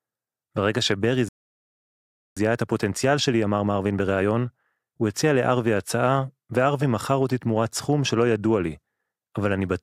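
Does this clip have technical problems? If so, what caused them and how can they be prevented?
Yes. A playback stall cuts the speech off at 1.28 s and leaves silence until 2.37 s, about 1.08 s. The player likely starved for data or had its thread blocked. A larger jitter buffer and a higher-priority audio thread would prevent it.

Time-compressed catch-up follows from 2.37 to 5.37 s. The player plays the speech about 1.1 times faster, cutting and cross-fading short pieces to clear the backlog. Unlike simply speeding up the audio, this keeps the pitch normal. Avoiding the stall removes the need for it.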